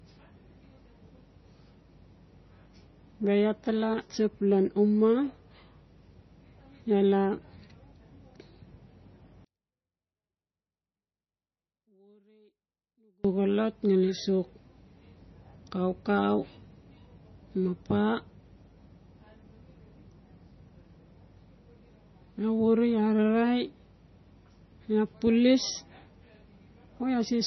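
The speech in this clip has most likely been through low-bitrate MP3 compression, and the damage is heavy. With too few bits, the encoder throws away weaker frequency lines, which then flicker in and out between frames, giving the whole recording a watery, swirling texture with metallic chirps on sibilants and smeared onsets. Nothing survives above 6 kHz, and the overall character fits a bitrate around 24 kbps. From 9.45 to 13.25 s, likely one channel inverted in polarity before the signal was folded to mono, so the sound common to both sides cancelled. For those 3.8 seconds the audio, background included, drops by about 38 dB to a faint leftover of whatever differed between the channels, returning at full level just before "xolot ngali sok".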